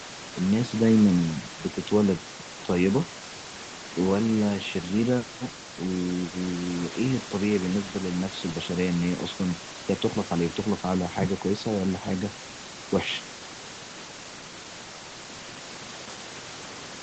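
No technical faults can be heard in the speech: the call's microphone processing trims the lowest bass and leaves nothing above 8 kHz, as it normally does, and the room's background noise sits about 17 dB below the voice.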